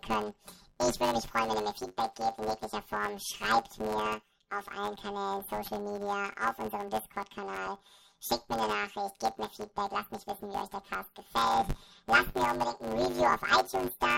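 Throughout, the speech carries a robotic buzz at 100 Hz without an octave shift: planar audio read as interleaved, with 10 ms blocks each replayed as left then right.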